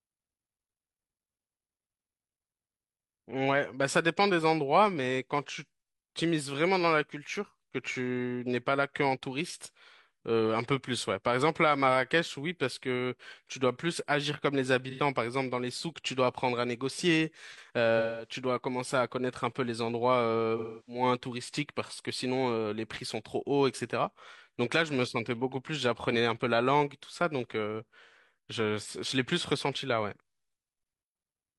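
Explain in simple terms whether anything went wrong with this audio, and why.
Yes. The speech has AAC frame loss with concealment at 14.90, 17.97, 20.57 and 28.04 s. Pieces of the stream went missing, lasting about 85 to 300 ms. The decoder patched each gap from the last good sound, leaving short smeared, noisy patches.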